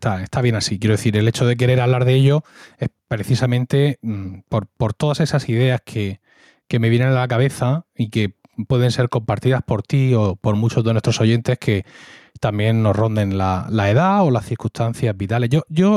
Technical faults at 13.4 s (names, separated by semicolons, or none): gain pumping